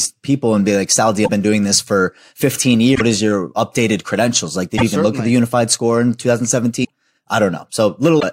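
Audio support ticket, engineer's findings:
Speech, five short garbled bursts at 1.24–1.30, 2.94–3.01, 4.77–4.83, 6.83–6.90 and 8.19–8.24 s, each 44–70 ms (two to three 26.1 ms frames), with the speech jumping ahead. Likely a broken MP3 bit reservoir: after dropped frames, the next frames pull borrowed data from the wrong bytes. On the spectrogram, vertical broadband smears breaking the harmonics; on the waveform, an abrupt discontinuity with a malformed envelope.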